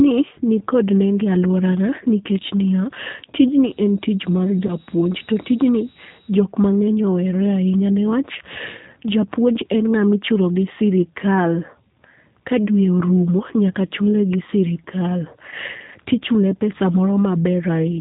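From the start and for the whole clip, the speech sounds slightly rough and synthetic, with a plainly audible coded quality and nothing above 4 kHz. This is the G.729 codec, and the sound fits its 8 kbit/s mode. Rather than sending the waveform itself, it rebuilds each 10 ms frame from a vocal tract filter, a pitch estimate and a handful of pulses. That coarse model of the speech is what strips the natural texture, and the codec's narrowband design removes the top end.

At 4.67 s the speech briefly turns into a stretched buzzy tone or coloured noise that fades, and it stays weak and smeared until about 4.74 s. This is VoIP packet loss concealed by the speech codec. About 20 ms of audio went missing, which fits one lost packet. The decoder filled the gap by extending its last pitch and filter with falling gain. Each frame builds on the previous one, so recovery lags the returning data by roughly 50 ms.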